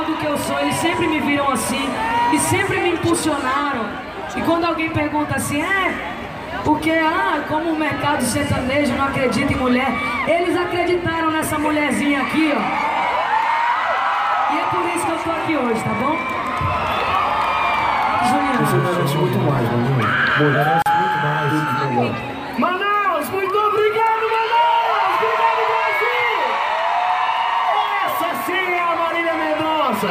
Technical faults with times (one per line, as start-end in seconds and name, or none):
20.82-20.86 gap at a join of encoded pieces